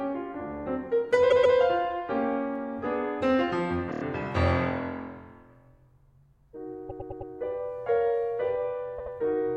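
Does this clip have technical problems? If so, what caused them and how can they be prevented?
Yes, this music has repeated frames at 1.29–1.56 s, 3.91–4.01 s, 6.89–7.30 s and 8.98–9.13 s. Blocks of 130.6, 26.1, 104.5 and 78.4 ms replay two to four extra times. Unlike a dropout, nothing goes missing; identical audio repeats and the music runs late. Checking frame sequence numbers when writing or streaming prevents it.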